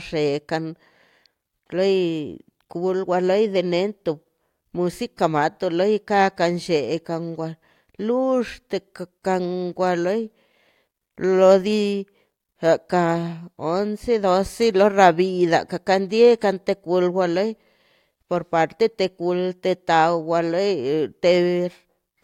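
No technical faults are audible.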